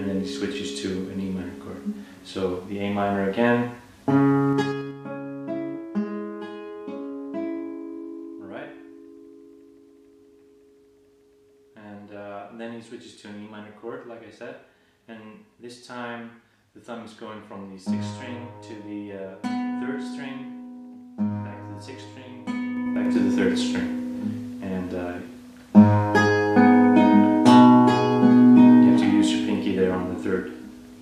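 A short run of ticks from 4.48 to 4.97 s, as the level drops by roughly 15 dB, returns from 22.72 to 23.21 s as it rises by about the same amount. This is zipper noise: the gain moves in unsmoothed 3 dB jumps, around ten a second, each leaving a click.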